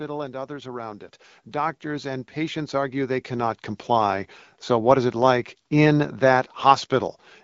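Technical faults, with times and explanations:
0.46 to 5.25 s, automatic gain rising: the level climbs steadily by about 16 dB over nearly five seconds, and the speech and the background noise behind it swell together rather than the speech alone getting louder. That shared rise is the sign of an automatic gain control that judged the input too quiet and kept raising its gain. The light codec damage, which fits AMR wideband at around 12.65 kbit/s, stays constant throughout the swell.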